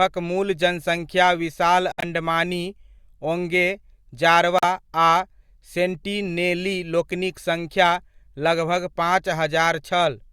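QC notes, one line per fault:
1.92–2.04 s, corrupt frame muted: a clean gap of about 0.12 s opens abruptly in the speech. Damaged compressed frames were rejected by the decoder and filled with silence, which fits a run of about five frames, so the dropout has hard edges.
4.58–4.64 s, corrupt frame muted: a shorter hole of about 0.06 s, consistent with roughly three rejected frames. The speech resumes on schedule afterwards, because the missing frames are replaced with silence rather than skipped.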